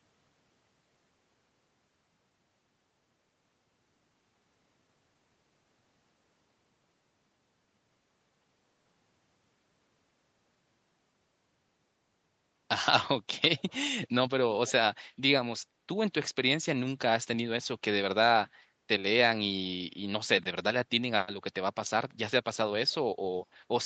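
Speech, and between 13.57 and 13.73 s there's a brief echo leak: a very faint copy of the voice trailing 339 ms behind, likely from a loudspeaker on one side of the call that the echo canceller didn't fully remove.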